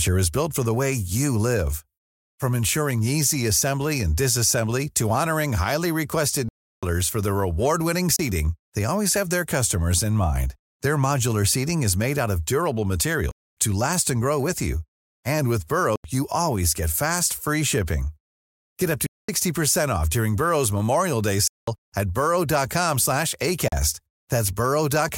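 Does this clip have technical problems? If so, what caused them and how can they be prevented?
Yes. The speech has seven blocks of digital silence: 6.49–6.83 s, 8.16–8.19 s before "they always have their", 13.31–13.57 s between "made out of durable" and "to last and grow", 15.96–16.04 s, 19.06–19.29 s after "up to", 21.48–21.68 s, and 23.68–23.72 s. The gaps run from 30 to 341 ms. Each cuts out hard and back with no fade. Buffers likely went unfilled in time. The 341 and 85 ms gaps fit 16384- and 4096-sample buffers. Larger buffers or higher processing priority would prevent this.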